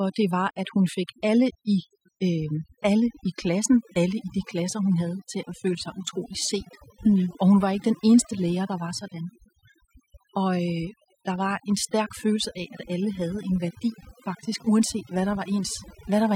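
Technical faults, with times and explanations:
Throughout: overdone noise removal. A noise reduction stage set too strong switches individual frequency bands down or off whenever they sit near its noise estimate, taking quiet parts of the speech with them. The background becomes near silence with twinkling specks. A spectrogram shows scattered isolated dots in the gaps and ragged, holed speech harmonics.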